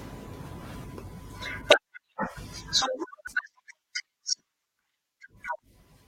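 Around 0.83 s, 3.26 s and 5.59 s the speech gets hit by short blips of damaged data in a compressed stream, each over in under 20 milliseconds. What's happening is that some bytes in the encoded stream got corrupted, so the decoder can't make sense of those frames, loses its place, and has to hunt for the next valid frame header before it can carry on. That's the quick chirp, squawk, click or short hole you hear at each spot.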